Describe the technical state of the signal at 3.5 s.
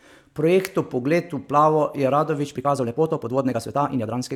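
At 3.5 s the speech is rushed, running at about 1.54 times its natural pace while the pitch stays put. This is a time-stretched section, beginning at 2.42 s just after "v plavo je" and lasting to the end of the clip at 4.36 s. The likely cause is software compressing that stretch to fit a shorter length, preserving pitch by dropping short slices of audio, which leaves a sudden jump in tempo.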